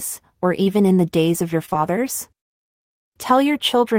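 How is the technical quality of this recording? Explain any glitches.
The recording has short concealed packet loss: brief dropouts at 0.63–0.67 s, then at 1.65–1.69, 1.69–1.73 and 1.73–1.76 s right after "days of your". Each time, about 20 ms of audio never arrived, and the receiver extended the preceding sound and then blended back. This is heard as a quick smear or wobble. On a spectrogram it shows as blurred, stretched harmonics; on the waveform, as repeated cycles with a soft seam.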